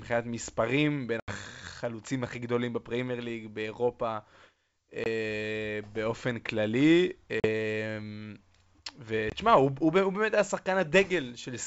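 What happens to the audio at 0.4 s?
At 0.4 s the audio is intact, with the speech carried cleanly through G.722 wideband telephone coding at 64 kbit/s.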